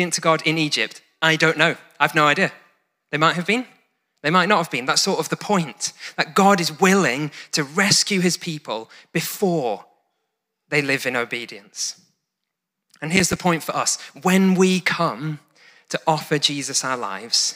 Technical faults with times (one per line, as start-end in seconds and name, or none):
13.17-13.36 processor overload crackle